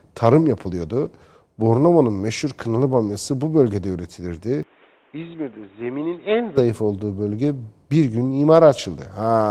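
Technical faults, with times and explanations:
4.63–6.58 s, input switched to a poorer device: speech abruptly turns dull and about 10 dB quieter, with nothing above 3.8 kHz and a new noise floor, likely a different microphone; the switch comes just before "olduğu bölge bir".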